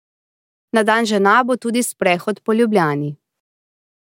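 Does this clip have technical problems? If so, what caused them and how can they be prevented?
No, the signal is technically sound, with nothing in the recording or its playback path that calls for a cause or a preventive fix.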